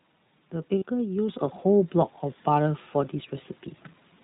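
Throughout, the speech carries the iLBC codec's narrowband sound: nothing above 4 kHz, and a slightly rough, synthetic edge that fits its 15.2 kbps mode with 20 ms frames. Unlike a plain low-pass filter, the roughness comes from coarse coding of the excitation, not just missing treble.

From 0.78 to 0.84 s come lost iLBC frames, a gap of about 40 ms that points to two dropped 20 ms frames. The decoder repeated the last pitch cycle with added noise, so the gap sounds like a brief held, buzzy vowel rather than silence or a click. Because each iLBC frame is decoded independently, the speech is clean again immediately afterwards.

At 1.29 s the microphone volume is stepped up by about 6 dB in a single jump. The call software raised the device's input level, so the speech and the background noise get louder together, mid-stream. That shared rise tells it apart from a talker simply speaking louder, where the background would stay put.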